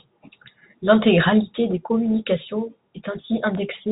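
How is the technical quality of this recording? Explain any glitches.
The technical quality holds up with no glitches to explain, the sound carrying the narrow bandwidth of ordinary G.711 telephone coding.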